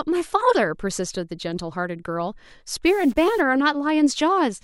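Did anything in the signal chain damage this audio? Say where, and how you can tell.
Yes. From 2.86 to 3.41 s the speech turns noisy and distorted, with a noise bed under it: a stuck bit. The likely cause is a converter or data line holding one bit fixed, shifting about half the samples by a step near -40 dBFS.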